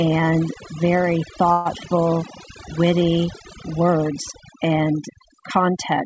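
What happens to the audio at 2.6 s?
At 2.6 s the speech carries overdone noise removal. It runs through the whole clip, so this moment is no exception. The noise reducer is set too hard. It pulls individual frequency bands far down whenever they sit close to its noise estimate. Quiet parts of the voice fall below that line and vanish too. The background drops and breaks up into small twinkling specks. Separately, nothing reaches above 8 kHz, which fits a wideband call codec like G.722.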